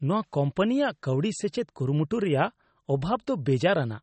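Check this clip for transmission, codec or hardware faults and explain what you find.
One codec fault runs through the whole speech clip. The sound is watery and swirly, with smeared consonant attacks and nothing above 8.4 kHz. That is most likely MP3 compression, starved of bits at a rate that fits about 32 kbps, so the encoder cuts the treble and lets weak frequency lines flicker on and off between frames.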